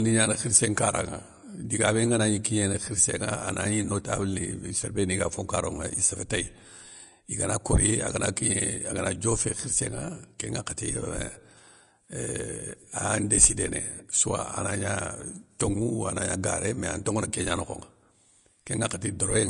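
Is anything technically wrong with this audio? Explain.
Yes. Throughout the speech there is plainly audible damage that sounds like Vorbis compression, likely the cause. Nothing is present above 10.5 kHz, and the remaining treble is quantised so coarsely that fine detail has turned into hiss of similar energy. Sibilants sound grainy, voiced tones are roughened, and consonant attacks are blurred, which fits a low bitrate of around 39 kbps. On a spectrogram, energy stops at a flat 10.5 kHz ceiling, and the upper band appears as speckled, patchy noise.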